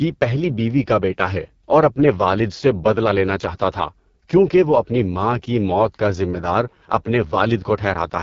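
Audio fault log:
throughout AMR wideband (HD Voice) codec: speech forced through a very low coding rate, which fits 6.6 kbit/s, turns rough and raspy, with nothing above 7.4 kHz.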